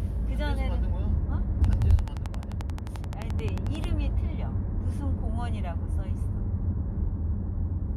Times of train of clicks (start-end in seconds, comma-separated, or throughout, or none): 1.64-3.85